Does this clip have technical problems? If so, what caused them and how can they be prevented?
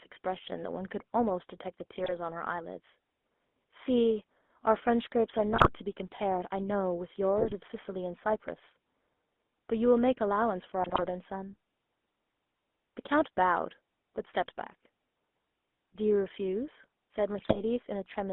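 Yes. The whole clip carries the sound of the GSM full-rate codec: a buzzy, gravelly roughness on the speech, with the band held to roughly 250 Hz to 3.5 kHz. This codec models the vocal tract as a filter and drives it with a coarse pulse excitation, so the rasp comes from that pulse train and not from clipping or background noise. The grit stays constant and tracks the voice, which fits a 13 kbps GSM stream. Carrying the call over a wideband codec such as AMR-WB or Opus prevents it.

Sudden squawks, pops and gargling appear at 2.04–2.13 s, 5.50–5.69 s, 7.38–7.54 s, 10.83–11.04 s and 17.38–17.60 s. These are GSM bit errors. Corrupted bits reached the decoder and scrambled its filter, pitch or gain values for a few frames, so the spectrum warps and the level jumps. Packet loss concealment would produce smooth repeats or gaps instead of these sharp, distorted bursts. A stronger radio link, or stronger channel coding with bad-frame masking, prevents them.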